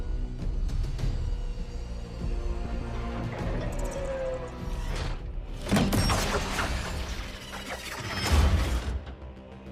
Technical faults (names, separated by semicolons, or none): frames out of order